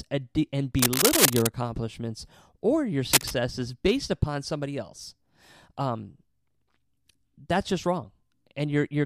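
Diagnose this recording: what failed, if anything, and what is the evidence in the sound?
Cable scratch noise in the analogue wiring: dense, uneven rustling, louder than the speech, from 0.79 to 1.48 s before "accomplishments or your" and 3.13 to 3.34 s before "based upon somebody else". Likely a worn connector's shifting contact resistance; speech continues underneath, unlike dropouts.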